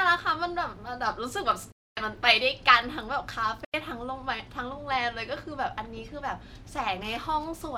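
Speech with two Bluetooth dropouts: silent holes from 1.72 to 1.97 s and from 3.64 to 3.74 s, most likely late radio packets being discarded. Unlike an edit cut, the sound resumes further along, as if it had kept playing.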